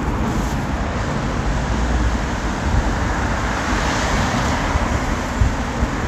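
Nothing in this recording of everyday sounds stands out as a technical fault, so there's no problem to point to here.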